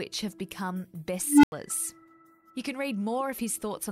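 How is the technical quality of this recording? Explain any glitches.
The recording has one clear glitch. At 1.26 s an unstable filter runs away: its feedback grows unchecked, so a tone around 300 Hz swells over 170 ms, overflows, then drops to silence for 87 ms.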